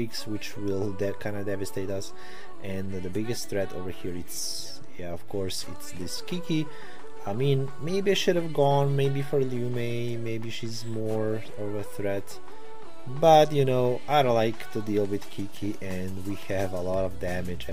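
From start to end the waveform carries a DC offset of about -30 dBFS, a constant shift away from zero. It cannot be heard as such, but it eats into headroom and appears as a steady component at 0 Hz.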